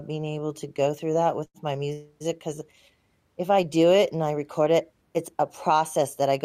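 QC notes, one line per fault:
1.45–1.57 s, short stall from a late packet. After "to go through that", the sound is held 91 ms while the buffer waits. Nothing is lost.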